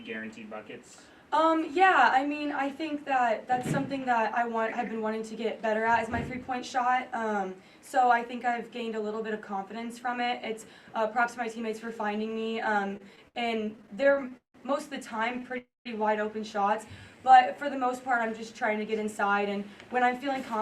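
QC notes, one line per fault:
12.89–14.56 s, repeated stalls (stutter): the audio drags and stutters as the jitter buffer keeps running dry. Across this span it stops 18 times, with the receiver extending the last sound to bridge each wait. About 427 ms is filled this way, roughly a quarter of the span, and the longest wait is 173 ms. Nothing is lost, only delayed. On a spectrogram, short horizontal smears of frozen spectrum repeat, and the longer ones fade toward the end.
15.39–15.43 s, short stall from a late packet: one packet is not there in time, so the receiver holds the last sound for 20 ms and then resumes exactly where it stopped. This adds 20 ms of delay, and nothing is lost. It is heard as a brief hold with a faint buzz or dip. On a waveform, one cycle pattern repeats for a moment before the normal shape returns. On a spectrogram, a short horizontal smear shows the frozen spectrum.
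15.58–15.87 s, call audio freeze: the sound hangs as a short buzz that decays, then goes silent, then resumes from the same point. The fill lasts 275 ms, of which about 170 ms is silence, and the delay grows by 275 ms with nothing skipped. The likely cause is packets held up in transit, leaving the jitter buffer empty. On a waveform, a brief repeating, decaying pattern drops to a flat line. On a spectrogram, a smeared, fading band is followed by a blank gap.
17.02–18.80 s, jitter buffer slow-down: the receiver builds up its reserve by repeating single pitch periods and pieces of pauses. This stretches the passage by 138 ms, so it plays at about 93% speed while the pitch stays the same. Sounds come out drawn out. On a spectrogram, harmonics stay at the same frequencies but events are spaced wider. On a zoomed waveform, identical consecutive cycles are visible where periods were duplicated.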